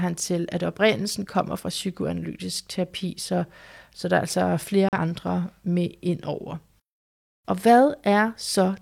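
At 4.89 s, just after "så der er altså", the speech suffers a digital broadcast dropout. The receiver got a corrupted or missing frame and muted until clean frames returned at 4.98 s. The result is a brief silent hole of about a tenth of a second. Its length fits a single lost frame of about 43 ms plus the mute and recovery. Unlike packet-loss concealment, nothing is repeated or smeared over the gap; the audio simply goes silent, and whatever was sent in that moment is gone.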